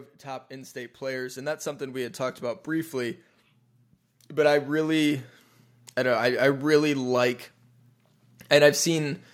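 From 0.24 to 3.26 s, and again from 4.28 to 5.28 s, automatic gain rising lifts the level by about 10 dB and then about 4 dB. The control judged the input too quiet. Background swells with the voice, unlike a talker moving nearer.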